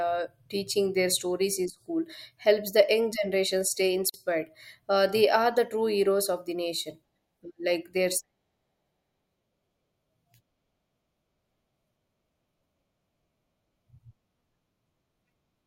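Speech with a brief silent dropout from 4.10 to 4.14 s, about 44 ms, where sound stops and resumes unchanged, a gap at a join of encoded pieces left by untrimmed encoder delay and padding.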